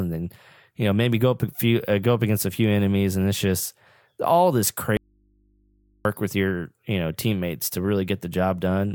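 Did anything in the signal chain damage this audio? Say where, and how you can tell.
Yes. There is an audio dropout to a faint residue from 4.97 to 6.05 s, after "it's just all this". The sound cuts abruptly to hum roughly 40 dB down, likely from a momentarily open analogue input.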